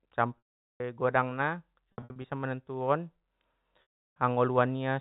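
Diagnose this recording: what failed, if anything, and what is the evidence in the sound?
Held, buzzy tones that fade to silence at 0.38–0.80 s and 3.82–4.16 s, plus brief stutters at 1.92–2.24 s, point to network packet loss with pitch repetition. The receiver loops the last pitch period and fades it within about 50 ms, so longer gaps fall silent.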